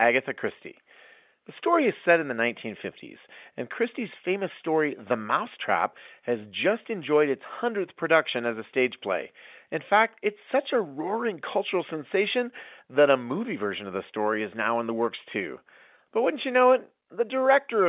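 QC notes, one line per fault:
No faults heard.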